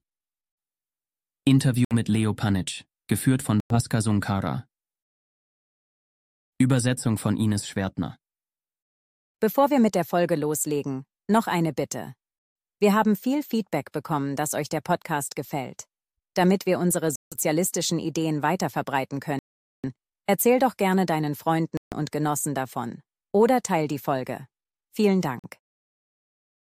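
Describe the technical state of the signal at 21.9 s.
A Bluetooth stall runs from 21.77 to 21.95 s, so 21.9 s falls inside it. The sound drops out to silence for about 146 ms and then resumes. The likely cause is radio interference delaying packets on the wireless link, so the headphones' playback buffer emptied before the next audio arrived. Output halted until the retransmitted packets came through, then carried on from the point where it had stopped or slightly later.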